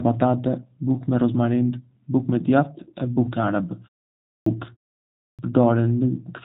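Throughout, the speech carries plainly audible G.729 codec damage. Nothing above 3.8 kHz passes. The sound is rough and synthetic, which points to an 8 kbit/s stream.

At 4.12 s and 5.05 s comes a clipped start after a pause. Following silences of 0.32 and 0.37 s, the output wakes late. About 0.34 s of speech is swallowed each time, so it bursts in abruptly.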